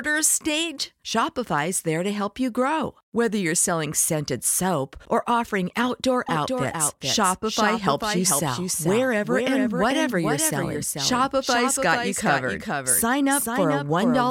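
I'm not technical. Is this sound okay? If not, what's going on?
No. From about 6.29 s, just after "soap or offering outdoor", a doubled audio track starts abruptly: a quieter copy trails under half a second behind until the end. Unlike a room echo, it never fades and sounds just as clean, likely from the sound being captured twice.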